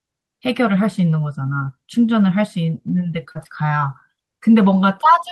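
Packets went missing in a burst around 3.1 to 3.9 s. For the lost packets at 3.13–3.15 s and 3.25–3.27 s, the next packet carried a low-bitrate copy, so these show lost packet rebuilt from error correction: 20 ms stretches with no gap but a rougher, noisier texture. Between 3.31 and 3.37 s about 40 ms arrived too late and the decoder extended the preceding sound for roughly 35 ms, a short concealed packet loss heard as a brief smear. The end of that stretch, 3.35–3.37 s, was restored from the error-correction copy. At 3.44–3.47 s about 20 ms went missing, about 13 ms of it filled with continued sound and giving a small wobble, and its last 20 ms again came from the rougher copy. One more 20 ms rebuilt packet at 3.91–3.93 s adds another grainy blip.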